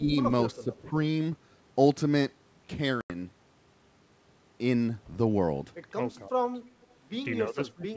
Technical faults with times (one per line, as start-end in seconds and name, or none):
0.00-0.10 speech suppressed in double talk
0.52-0.93 speech suppressed in double talk
0.73-0.78 echo leak
3.01-3.11 packet loss on an ADPCM call
6.16-6.39 speech suppressed in double talk
6.85-6.94 echo leak
7.47-7.97 speech suppressed in double talk